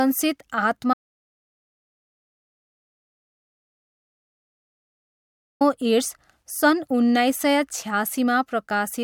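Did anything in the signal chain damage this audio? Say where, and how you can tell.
Yes, there's an audio dropout to silence from 0.94 s to 5.61 s, roughly 4.7 s of speech just gone. The gap is silent with no room tone, so the input likely dropped upstream, a device or link losing signal while the recorder kept writing silence.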